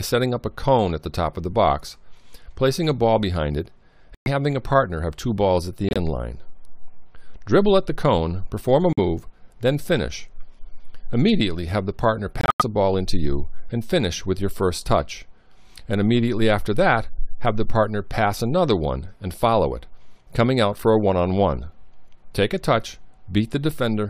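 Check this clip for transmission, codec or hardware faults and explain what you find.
Four dropouts point to corrupt frame muted. Damaged compressed frames were rejected by the decoder and replaced with silence, so the sound cuts abruptly to nothing at 4.15 to 4.28 s, 5.88 to 5.97 s, 8.93 to 8.99 s and 12.41 to 12.62 s. Each gap spans several frames, and timing is kept across every hole.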